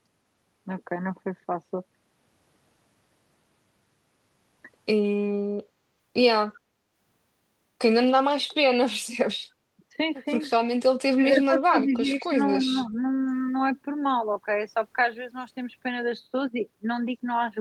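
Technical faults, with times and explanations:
5.63–5.81 s, background gated by the echo canceller: the room sound drops by about 8 dB for roughly 200 ms and then returns. The echo canceller clamped the microphone while the far-end loudspeaker was active, so the ambience is briefly pulled down.
10.90–10.96 s and 11.14–13.11 s, speech suppressed in double talk: a very short, deep dip of roughly 35 dB, then a longer stretch where the speech sinks by around 15 dB in patches totalling about a second. This is likely an echo canceller attenuating the near talker while the other side was also speaking.
12.60–12.67 s, echo leak: a faint delayed copy of the speech arrives about 285 ms late, roughly 30 dB below the direct sound, as a short scrap. The likely cause is a loudspeaker path whose echo canceller let some residual echo through.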